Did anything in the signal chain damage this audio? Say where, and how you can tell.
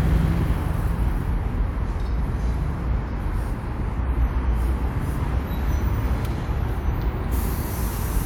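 No, nothing along the chain seems to have hurt this recording, so there's no damaged stage to point to.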